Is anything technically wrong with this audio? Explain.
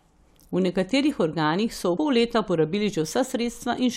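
Yes. At 1.96 s there is damaged data in the compressed stream: corrupted bytes make the decoder misread a frame and resynchronise, producing a brief glitch in the speech.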